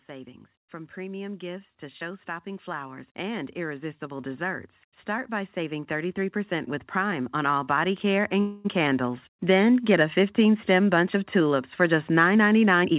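A speech recording that has passed through a narrowband call path, with nothing above 4 kHz, which fits G.711 mu-law at 64 kbps. The automatic gain is rising twice. From 0.07 to 4.47 s the level climbs by about 8 dB, and from 5.05 to 9.76 s, just before "get a", by about 9 dB. Voice and background swell together over several seconds. That gradual, shared rise is what separates it from a speaker simply moving closer or talking louder, where the background would stay put. During the second rise, from 8.40 to 8.67 s, there is a call audio freeze. For 245 ms the last sound is held as a decaying buzz rather than dropping to silence. Afterwards the speech picks up exactly where it left off, with nothing lost, so the whole stream now runs 245 ms later. Packets were likely delayed and the jitter buffer ran dry. A concealed packet loss would differ: speech would be skipped rather than merely postponed. 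At the very end, from 12.81 to 12.96 s, a jitter buffer speed-up plays the audio at about 177% of normal speed. Roughly a tenth of a second is trimmed out in short pitch-period slices, so the speech sounds hurried while its pitch stays unchanged. That unchanged pitch is what tells it apart from a resampling error, which would raise the pitch along with the speed.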